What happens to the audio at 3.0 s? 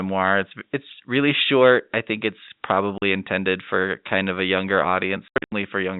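Packet loss filled with silence hits at 2.98 to 3.02 s, right after "short I think it's" and just before "intended for kind of". About 40 ms of audio never arrived, and the receiver played dead silence in its place. The length points to two consecutive 20 ms packets going missing. The speech drops out abruptly, with hard cuts at each edge of the gap against the band-limited telephone-quality sound of the G.711 channel.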